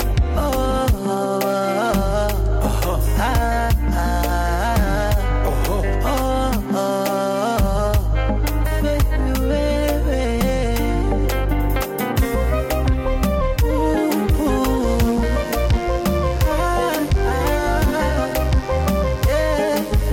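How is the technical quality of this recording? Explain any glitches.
The recording picks up a mains buzz from 14.80 s to the end at 20.13 s. Sharp switching spikes from a dimmer, rectifier or unshielded line enter twice per 50 Hz cycle, stacking harmonics up into the kilohertz range and producing a steady, raspy buzz roughly 20 dB below the main sound.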